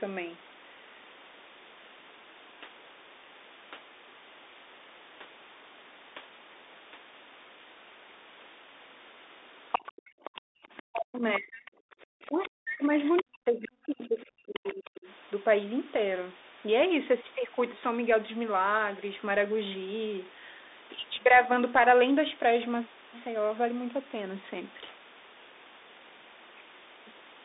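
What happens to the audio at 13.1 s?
The talker's speech sinks deep, by about 40 dB at worst, and breaks up from 12.22 to 15.07 s, likely speech suppressed in double talk as the echo canceller ducks both voices.

From 13.05 to 13.23 s a second, quieter voice about 10 dB below the talker cuts in, likely the other side's voice leaking through from the loudspeaker past the echo canceller.

Throughout, the sound is narrowband, roughly 250 Hz to 3.7 kHz, with scratchy sibilants and granular hiss from the Bluetooth CVSD headset codec's one-bit, 64 kHz up-down coding.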